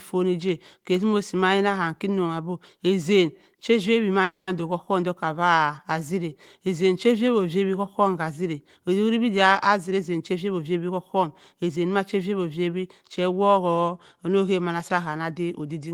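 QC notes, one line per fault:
4.23–4.49 s, call audio freeze: packets were likely held in transit until the jitter buffer emptied, so the receiver stretched the last sound into a fading buzz or hiss, then about 150 ms of silence. The audio then resumes where it stopped, with nothing lost and 240 ms of added delay.
9.69–11.91 s, jitter buffer speed-up: the buffer held more audio than its target, so the receiver repeatedly cut out pitch-period-length slices, about a fifth of a second in total. The sound runs at 111% speed with unchanged pitch and comes across as hurried.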